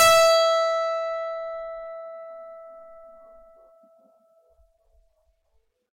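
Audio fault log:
0.00–0.44 s, hard clipping: The music opens about 13 dB hotter than the stage can pass. Its peaks are sliced flat. Those squared-off tops spray harmonics high into the spectrum. With overload this large, every loud moment carries a harsh fuzz.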